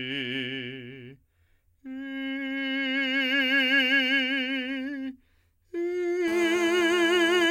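GSM phone buzz runs from 6.28 to 7.46 s near the end of the music. A nearby 2G handset transmits in short radio bursts about 217 times a second, and somewhere in the audio chain a circuit rectifies those pulses into the signal. The result is a hard, raspy buzz at 217 Hz, dense with harmonics and unrelated to the music, sitting about 13 dB below it. It holds nearly steady, which points to a phone on a call.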